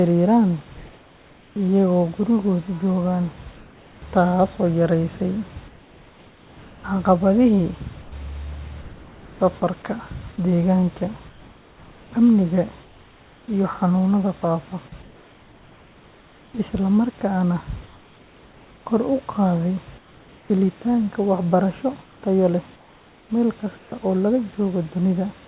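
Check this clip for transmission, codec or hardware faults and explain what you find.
Two kinds of fault are present, both from discontinuous transmission on a call path whose band stops at 4 kHz.

Comfort noise in place of the background occurs at 3.56–4.02 s, 5.68–9.4 s (ending just before "safarka deegaanka"), 11.28–13.48 s (after "safarka deegaanka", before "iyo xanuunada faafa"), 15.02–16.54 s, 17.86–20.5 s (after "isla markaana") and 22.02–23.92 s. The sender likely stopped transmitting during pauses, so the receiver generated synthetic noise roughly matching the room's spectrum. The natural, textured background becomes a flat, steady hiss, about 3 dB quieter in the first and fourth gaps. On a spectrogram these stretches show smooth, uniform noise, and the waveform settles into an even, slightly lower floor.

Sound dropped by the voice detector occurs at 8.02–8.12 s, inside the second pause. 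About 70 ms of real sound was misjudged as background and likely not sent, so comfort noise plays instead. The brief sound vanishes into the same steady hiss. On a spectrogram the short event's energy is missing and replaced by featureless noise, and the waveform shows no transient there.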